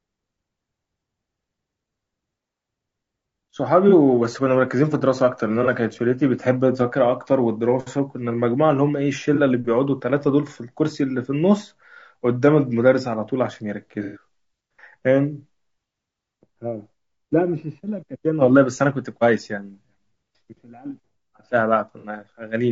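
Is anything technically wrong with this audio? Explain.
Yes. Throughout the speech there is a rough, grainy quality, likely from low-delay AAC compression (AAC-ELD) at a low rate, which fits about 32 kbps. Its short frames resolve the pitch harmonics poorly, so noise fills the gaps between them and the top band sounds thin and synthetic. A spectrogram shows smeared, blurry harmonic lines with a speckled noise floor between them.

AAC frame loss with concealment occurs at 3.89–3.94 s, 5.63–5.68 s, 9.35–9.40 s, 14.03–14.23 s and 21.98–22.07 s. The decoder filled each gap by repeating and scrambling the last good spectrum. The short dropouts, consistent with one or two frames each, sound like brief smeared, phasey blips. The longest, at 14.03 s, is a noisier, washed-out patch of about 120 ms. A spectrogram shows vertical bands where the harmonic detail turns to diffuse noise. The waveform shows envelope discontinuities at these points.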